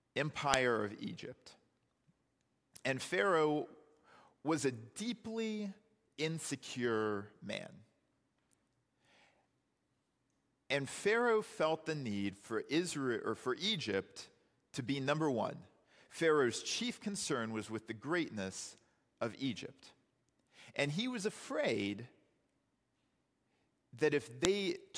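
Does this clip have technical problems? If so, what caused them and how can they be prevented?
Yes. Two sharp, loud clicks cut through the speech at 0.54 s and 24.45 s. This is a file header played as audio: WAV pieces were joined with their headers intact, so those header bytes played as samples. Strip each header before concatenating or streaming.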